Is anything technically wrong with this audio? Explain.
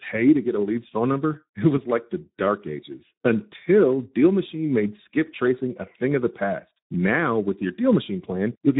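Yes. Throughout the speech, the sound is hoarse and grainy, and nothing above about 3.9 kHz. This is Speex codec damage: this low-rate CELP coding, consistent with roughly an 11 kbps setting, leaves too few bits to model the excitation faithfully.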